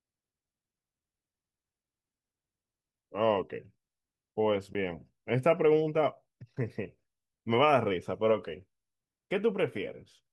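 At 4.73 s the speech cuts out for about 14.5 ms, a brief gap of silence. This is a Bluetooth dropout, likely caused by audio data failing to arrive at the headphones in time, so the output fell silent; the short length fits a single lost packet. Speech resumes as though it had kept playing. On a waveform it appears as a flat, near-zero notch, and on a spectrogram as a thin vertical blank stripe across all frequencies.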